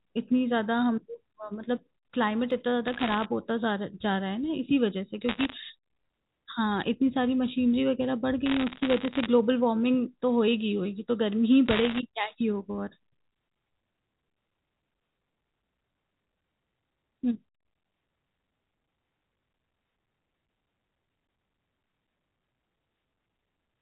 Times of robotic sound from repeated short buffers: none

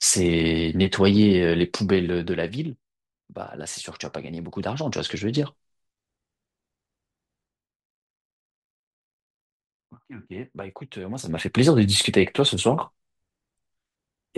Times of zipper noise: 1.76-2.93, 11.10-11.56

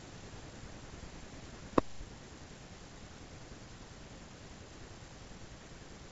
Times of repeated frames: none

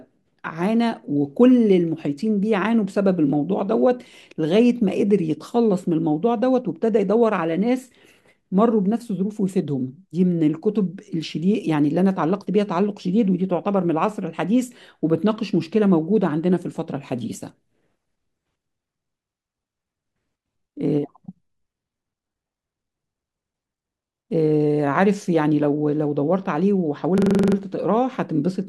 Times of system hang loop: 27.18-27.56

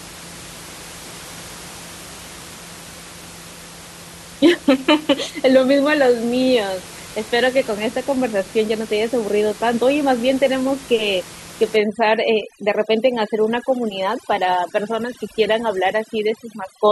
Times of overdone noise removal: 11.76-16.92

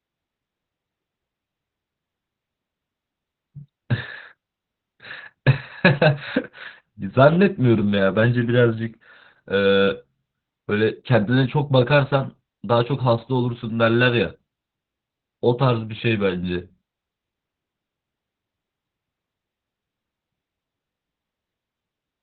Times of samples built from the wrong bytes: none

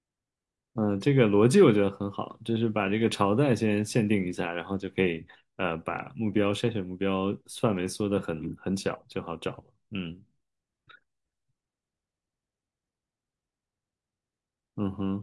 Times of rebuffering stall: none

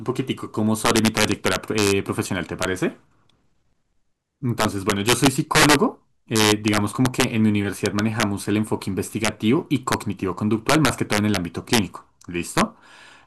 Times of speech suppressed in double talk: none

